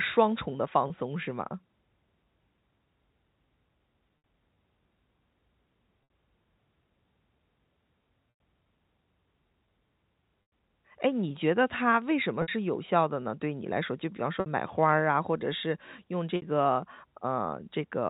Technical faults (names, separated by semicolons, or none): packet loss with pitch repetition